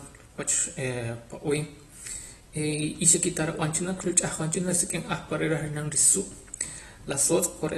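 Speech, and across the whole clip it carries plainly audible AAC compression damage, likely from AAC-LC at a low bitrate in the region of 32 kbps. Nothing survives above 12 kHz, so the top end sounds dull, and the remaining spectrum is thinned and smeared, giving sibilants and held sounds a fizzy, warbling texture. A simple low-pass filter would only remove the top and leave clean, stable detail below it.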